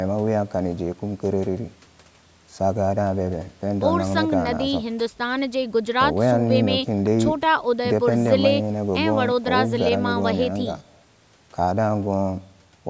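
No technical faults are audible.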